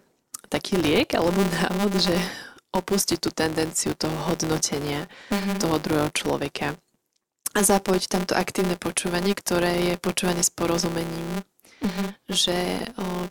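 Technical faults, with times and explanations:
Throughout: filter restarted on every block. Each block starts from zero state, leaving a small transient that adds a 200 Hz buzz tracking the speech level.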